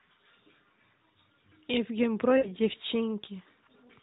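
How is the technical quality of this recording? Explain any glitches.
The recording is narrowband mobile speech, with nothing above 4 kHz on a spectrogram, and it has two brief dropouts from lost AMR speech frames.

Lost AMR speech frames, 0.52 to 0.55 s and 2.38 to 2.47 s: corrupted frames were replaced by the decoder repeating the previous pitch and spectral shape at falling gain. The first gap fits one 20 ms frame and sounds like a short dip. The second gap is about 60 ms and sounds drawn out and fading. On a spectrogram, frozen harmonics smear across each gap. On a waveform, the envelope sags.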